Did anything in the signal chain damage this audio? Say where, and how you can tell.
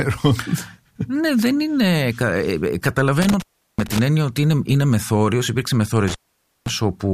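Yes. The analogue wiring shows an intermittent contact twice: from 3.22 to 3.99 s, just before "έννοια ότι είναι είναι", and from 6.08 to 6.70 s. A loose plug or cable momentarily breaks the connection, so the speech drops out for about 0.37 s and then about 0.52 s, with crackle where the contact opens and recloses. On the waveform each gap is a near-flat stretch framed by sharp spikes. On a spectrogram it is a dark band with broadband vertical streaks at both edges.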